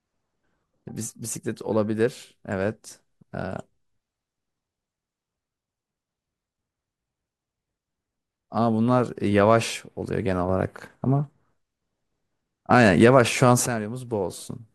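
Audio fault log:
No audible faults detected.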